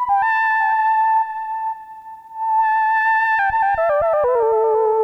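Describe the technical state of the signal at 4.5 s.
An unstable converter clock, sample clock jitter of around a microsecond present across the whole clip, times samples slightly early or late, leaving a faint roughness some 45 dB down that grows with loud, bright passages.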